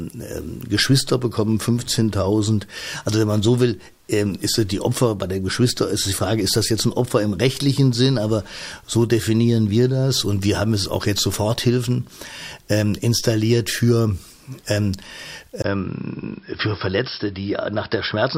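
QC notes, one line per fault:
15.62 to 18.38 s, input switched to a poorer device: After a 20 ms gap, the speech turns dull and boxy and stays that way to the end. Nothing is heard above 5.4 kHz. The level falls by roughly 5 dB, and a new background noise sits about 40 dB below the voice. The narrower band, changed tone and fresh noise floor likely come from the recording moving to a different, lower-grade microphone or a headset's call profile.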